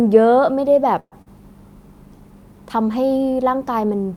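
Delayed packets likely drained the jitter buffer in this speech recording, producing a call audio freeze from 0.99 to 1.14 s: the last sound is stretched into a fading fill of about 120 ms, including roughly 50 ms of silence, before the speech resumes intact but about 123 ms later than before. Shortly after, a short concealed packet loss leaves about 40 ms of audio that never reached the decoder, and at 1.22 to 1.28 s the receiver papers over it with about 43 ms of synthesised continuation, heard as a brief smear before the real signal blends back in.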